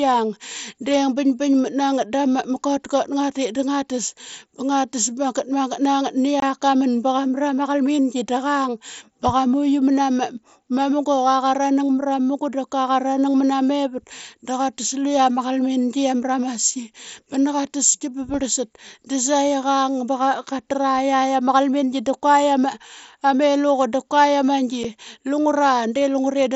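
At 6.40 to 6.43 s the speech drops out in a short hole of about 22.5 ms, which fits three consecutive lost packets of 7.5 ms. A second, single-packet gap of about 7.5 ms falls at 24.84 s. Both are unconcealed Bluetooth headset packet loss. The link between headset and phone lost voice packets and nothing filled them, so the sound stops and restarts with hard edges. On the waveform each appears as a flat run cut square into the signal. On the spectrogram it is a thin vertical blank band across all frequencies up to the 8 kHz ceiling of the mSBC link.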